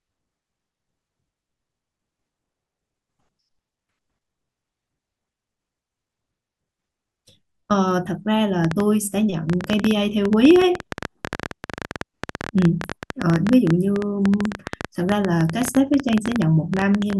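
Speech with a train of clicks from 8.65 to 17.14 s: uneven pops at 12.5 per second, about 10 dB above the speech, likely from electrical interference.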